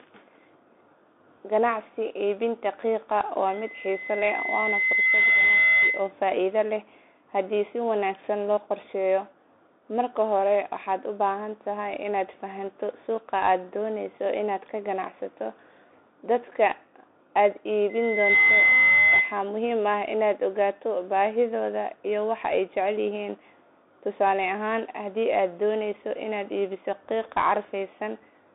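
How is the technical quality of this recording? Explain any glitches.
The quality is rough: the whole thing comes through a Bluetooth headset link, and a feedback squeal breaks in twice.

All the way through you hear the Bluetooth CVSD headset codec. The band sits at roughly 250 Hz to 3.6 kHz, with nothing above 3.8 kHz, which fits the 64 kbps CVSD used on headsets. CVSD encodes one bit per sample as a step up or down, and the step size adapts. Fast, loud high content outruns the steps, so sibilants turn scratchy and a grainy hiss sits under the speech. The damage is plainly audible.

The loudspeaker feedback squeal first runs from 3.47 to 6.12 s, ending just before "faa'iido leh haddii". The mic is picking up the speaker it feeds, and at 2 kHz the loop gain tops one, so that tone feeds itself. It swells over about two seconds to roughly 5 dB above the speech. It returns from 17.89 to 19.42 s at the same 2 kHz. 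This time it builds in about half a second and peaks around 10 dB over the speech.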